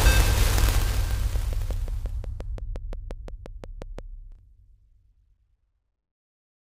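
A train of clicks runs from 1.36 to 4.00 s: about fifteen evenly spaced, near-identical pulses at 5.71 per second, peaking around 5 dB above the sound, likely from interference or a faulty connection. They tick steadily over the audio and through its pauses.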